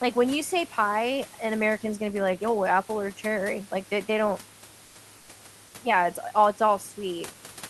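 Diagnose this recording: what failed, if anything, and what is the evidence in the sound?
In two brief pauses, from 4.85 to 4.95 s and from 5.17 to 5.29 s, the room's natural background gives way to a flat, featureless hiss, about 1 dB quieter, for 100 ms and then 120 ms. This is comfort noise in place of the background, at the codec stage, likely from Opus discontinuous transmission: the sender stopped coding the quiet gaps, sitting about 28 dB below the loudest speech, and the decoder filled them with synthetic noise matched only roughly to the real room noise.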